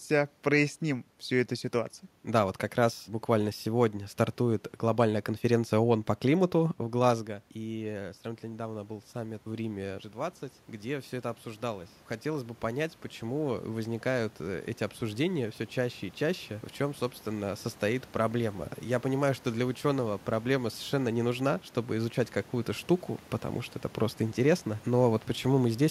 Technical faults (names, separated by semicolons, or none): automatic gain rising